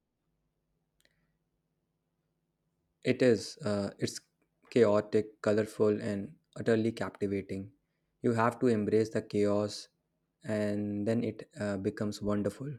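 Speech recording, with no technical faults audible at any point in the clip.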